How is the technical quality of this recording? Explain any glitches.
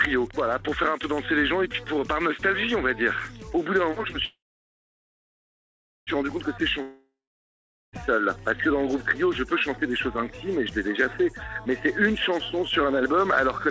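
The recording has three clear glitches, all typical of a network call. The audio is band-limited, with nothing above 8 kHz, which fits a wideband call codec such as G.722 at 64 kbps.

Call audio freeze, 4.25 to 6.10 s: the last sound carries on as a fading buzz, then about 1.7 s of near silence. The audio then resumes where it stopped, with nothing missing. The likely cause is held-up packets that emptied the jitter buffer, adding a 1.82 s gap and delay.

Long network dropout, 6.82 to 7.96 s: again the sound smears into a decaying buzz and then goes quiet for about 0.8 s. When it returns, roughly 1.1 s of audio has been skipped. This likely comes from packets that never arrived, so the lost stretch was never played.

Jitter buffer speed-up, 12.85 to 13.68 s: the audio runs about 7% fast at unchanged pitch and sounds hurried. The receiver trimmed short pitch-period slices, around 70 ms in total, to shrink an overfull buffer and cut delay.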